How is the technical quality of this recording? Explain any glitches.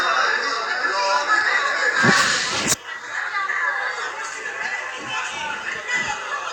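Nothing here stands out as a glitch; the sounds in the recording come across steady and undisturbed, with no dropouts, clicks or other technical hiccups to point to.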